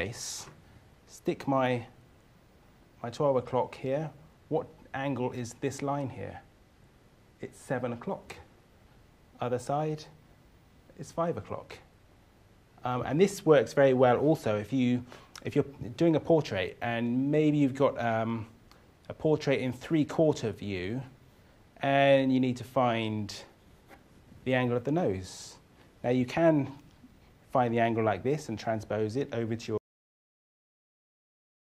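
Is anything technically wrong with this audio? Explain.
Yes. At about 29.78 s the audio has a cut-off end: the final buffers were never written, so the sound stops mid-event and drops straight to digital silence with no decay. That silence holds for the remaining 1.9 s of the clip.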